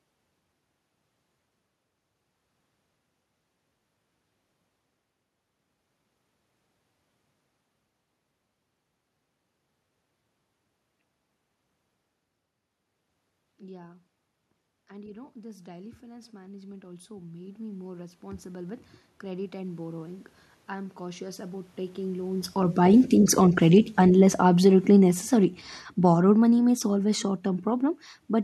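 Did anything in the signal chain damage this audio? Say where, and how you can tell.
Yes. The automatic gain rising runs from 14.96 s to 22.85 s, in the call-processing stage. Over nearly eight seconds the level climbs by about 18 dB, and the room noise swells in step with the speech. That shared rise is the giveaway. A talker moving closer would lift the speech against a steady background, but here the gain control judged the input too quiet and kept raising its gain across everything.

The automatic gain falling follows immediately, from 22.83 s to 28.01 s, again in call processing. The sound starts out loud and then sinks by about 11 dB, with the background sinking alongside it. The gain control found the signal too hot and pulled its gain back down gradually. A talker shifting position near 22 s comes just before this stretch, but it cannot explain the room noise falling too.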